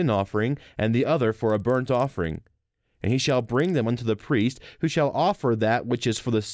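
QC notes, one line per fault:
1.5–3.9 s, after "and the other for": resampler restarted on every block, 48 kHz to 16 kHz; each 50 ms block converted without its neighbours, leaving edge errors heard as 20 Hz ticking under the speech.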